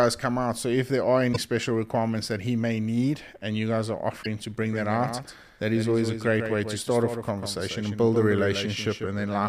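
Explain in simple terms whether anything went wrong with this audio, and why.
Two things went wrong. The first is damaged data in a compressed stream. Twice, part of the compressed audio file was corrupted, so the player could not read those stretches properly and had to skip ahead to find a clean point to resume. You hear it as a brief chirp or blip at about 1.29 to 1.36 s and again at about 4.19 to 4.26 s.

The second is a doubled audio track. From 4.62 s to the end, a second copy of the same speech plays alongside the first, trailing it by roughly 150 milliseconds and sounding noticeably quieter. The likely cause is the audio being picked up twice, once through a slower route, or two copies being left slightly out of step during editing. It comes in abruptly and sounds like a flat, close echo rather than the natural reverberation of a room.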